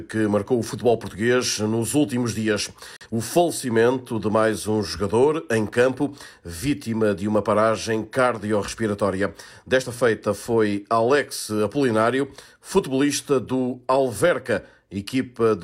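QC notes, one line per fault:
2.97–3.06 s, digital broadcast dropout: the receiver stopped getting valid data and muted output until clean frames resumed. The sound drops abruptly to silence and returns, with about 43 ms of programme missing, which fits one corrupted frame.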